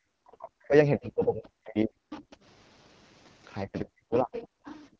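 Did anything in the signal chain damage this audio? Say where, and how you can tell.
Yes. At the codec stage, AMR wideband (HD Voice) coding runs through the whole clip at 8.85 kbit/s, one of its lowest rates. The speech sounds rough and raspy because the pulse-driven vocal tract model cannot represent the excitation accurately at that bitrate, and the top band is filled with synthetic noise.

In call processing, the speech dips heavily, by roughly 40 dB at the deepest, from 0.16 to 0.73 s, 0.97 to 1.95 s and 3.64 to 4.35 s. This is likely speech suppressed in double talk. The echo canceller could not separate the talker from the loudspeaker signal and attenuated the microphone path.

A faint second voice, the other side's voice leaking through, appears at 1.04 to 1.11 s, 2.1 to 2.32 s, 4.33 to 4.47 s and 4.64 to 4.84 s, about 15 to 25 dB below the speech. The likely cause is residual loudspeaker echo that the canceller failed to subtract from the microphone.

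From 4.89 s to the end, the room background drops by about 40 dB for roughly 100 ms. This is background gated by the echo canceller, which clamped the microphone hard while the loudspeaker was active. The missing bass below the microphone high-pass is expected.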